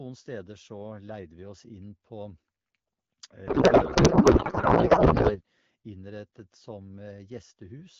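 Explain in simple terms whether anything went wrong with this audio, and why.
From 3.47 to 5.41 s, the speech turns into garbled, warbling noise: a codec payload misread. The sender packed the bits one way and the receiver unpacked them another. Unlike a dropout, the sound never goes silent.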